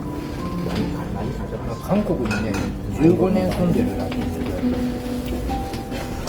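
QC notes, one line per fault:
Throughout: Opus compression, likely at a low rate around 24 kbps in music mode. Texture turns grainy and rough rather than swirly, since starved bands get filled with folded or noise-like content. It's plainly audible, though bandwidth stays full up to about 20.2 kHz.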